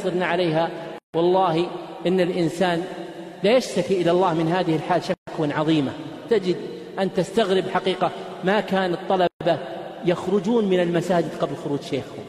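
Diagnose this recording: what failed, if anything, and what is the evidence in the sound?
The fault sits at the codec stage: gaps at the joins of encoded pieces. Silences open at 0.98–1.14 s (157 ms), 5.14–5.27 s and 9.27–9.41 s (133 ms each), spaced about 4 s apart. Each has smeared edges, and the sound resumes where it stopped. Encoder start delay and final-frame padding were left untrimmed at each join.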